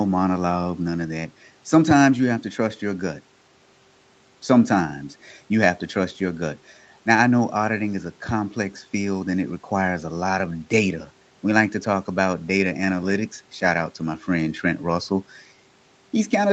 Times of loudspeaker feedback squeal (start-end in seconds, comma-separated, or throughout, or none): none